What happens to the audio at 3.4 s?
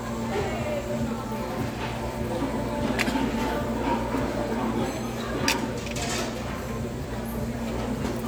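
Just before that point, from 3.29 to 3.40 s, frames play out of order. Two neighbouring blocks of about 46 ms each were decoded in swapped order. The short stretch is heard with its halves exchanged. It gives a brief garbled flutter. No time is lost.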